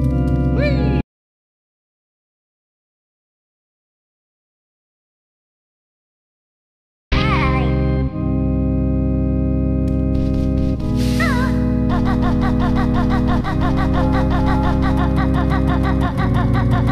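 An audio dropout to silence runs from 1.01 to 7.12 s, about 6.1 s of silence with no room tone, unlike a fade or noise-gated pause, likely from lost input.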